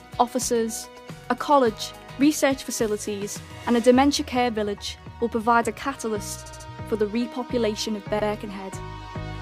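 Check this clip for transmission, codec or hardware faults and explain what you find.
There's one problem here, repeated frames, and it shows up three times. At 0.96 s a 116 ms block plays twice, which fits a run of five compressed frames being sent again. At 6.45 s a 70 ms block is played four times in a row, adding about 209 ms. At 8.18 s a 99 ms block repeats once. Each time, the decoder just replays data it already has, so you get a stutter, and the audio runs longer.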